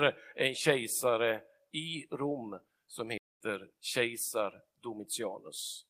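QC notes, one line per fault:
3.18–3.41 s, playback stall: speech drops to silence for 227 ms mid-flow, then resumes, likely because the player's buffer ran dry or its thread was blocked.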